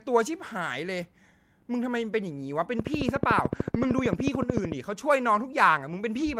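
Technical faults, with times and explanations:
1.01 to 1.03 s, lost packet rebuilt from error correction: one 20 ms stretch is played from the low-bitrate copy carried in the next packet, so it is briefly rougher and noisier, with no gap.
2.79 to 4.73 s, train of clicks: regular ticking at 13.5 per second, around 30 clicks, peaking about 15 dB above the speech. This is likely pulses from nearby interference.
3.39 to 3.89 s, lost packet rebuilt from error correction: scattered losses are filled from redundant low-bitrate copies totalling 240 ms. The pattern suggests about a dozen packets. These frames sound coarser and noisier.
3.71 to 3.74 s, short concealed packet loss: 20 ms arrived too late. About 10 ms was filled by extending the preceding sound, leaving a brief smear or wobble.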